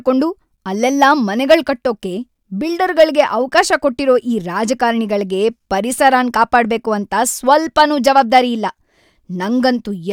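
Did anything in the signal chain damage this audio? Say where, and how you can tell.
Yes. Hard clipping occurs at 3.0–3.21 s, 3.58–3.75 s (just before "ಕೊಟ್ಟಿರೋ ಈ ರಾಜಕಾರಣೆಗಳ್ಗೆ"), 6.06–6.56 s and 7.52–8.38 s. The speech overdrives the converter or a gain stage by about 1 to 4 dB, flattening the peaks and adding high harmonics heard as crackle on the peaks.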